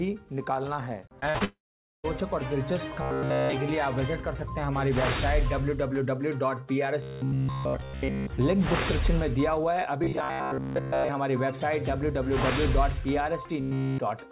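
Around 1.20, 1.30 and 1.38 s there are three quick bits of short concealed packet loss, each a few hundredths of a second patched over by stretching the previous sound, so you hear little smears or wobbles. Straight after, from 1.44 to 2.06 s, the sound trails off into a fading buzz or hiss and then goes quiet for roughly half a second before resuming, most likely a long network dropout. The robotic sound from repeated short buffers shows up at 2.96 to 3.53, 7.02 to 8.33, 10.04 to 11.09 and 13.61 to 13.98 s. Each stretch has a rigid, metallic 66.7 Hz buzz laid over the sound, likely from a 15 ms chunk being replayed in place of fresh audio. That covers most of each stretch and all of the last one. Nothing above 4 kHz comes through anywhere, which fits a narrowband G.711 call path.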